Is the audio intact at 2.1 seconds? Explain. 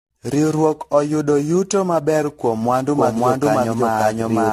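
No. Generation loss runs through 2.1 s and the whole clip, likely from around fifteen passes of AAC-LC at about 64 kbit/s, leaving smeared, hollow, swirly speech with blurred attacks and nothing above 14.1 kHz.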